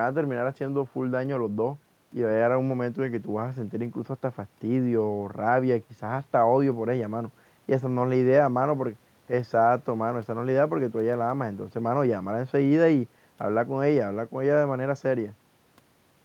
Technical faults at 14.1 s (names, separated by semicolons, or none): none